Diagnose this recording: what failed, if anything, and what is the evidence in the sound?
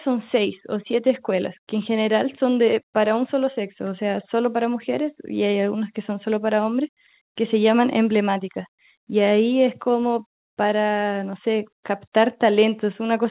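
Nothing failed: the speech went through a call path, and the absence of anything above 4 kHz fits narrowband coding such as G.711 mu-law at 64 kbps, with no defect to point to at any stage.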